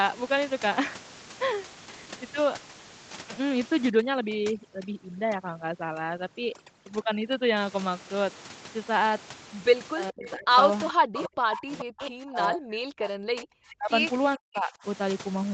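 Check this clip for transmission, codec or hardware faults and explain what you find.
Three kinds of fault are audible: overdone noise removal in the first half, then speech suppressed in double talk and echo leak clustered between about 10 and 15 s.

Overdone noise removal runs from 3.90 to 7.57 s. The noise reducer is set too aggressively for a room noise floor sitting only about 14 dB under the speech. It shuts off individual frequency bands whenever they approach its noise estimate. The background collapses to near silence scattered with twinkling specks, and the quieter components of the speech are stripped along with it.

Speech suppressed in double talk occurs at 9.99 to 10.51 s, 10.93 to 13.91 s and 14.36 to 14.85 s. The level drops by about 25 dB at worst in the first stretch, over roughly 0.4 s of affected audio. It drops by about 40 dB in the second, which lasts roughly 3 s, and in the third, roughly half a second. 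The cause is likely an echo canceller that cannot separate the near talker from loudspeaker echo while both sides are active, so it attenuates everything. The speech dips, dulls and breaks up in pieces.

Echo leak appears at 10.26 to 10.31, 10.88 to 10.94, 11.14 to 11.29, 11.53 to 11.60 and 11.78 to 12.07 s. Each burst is a delayed copy of the speech arriving 422 ms late, between about 10 and 20 dB below the direct signal. This is likely loudspeaker pickup that the far-end echo canceller did not fully remove, so residual echo is sent back down the line. It is heard as short fragments overlapping the suppressed stretch.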